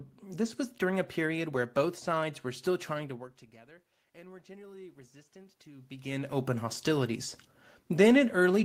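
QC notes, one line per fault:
3.64–6.00 s, automatic gain rising: input fell about 23 dB, so the AGC gradually added about 6 dB, making voice and room noise swell together.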